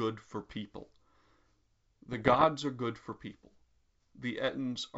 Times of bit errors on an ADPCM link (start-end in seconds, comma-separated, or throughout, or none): 0.40-0.57, 2.09-2.46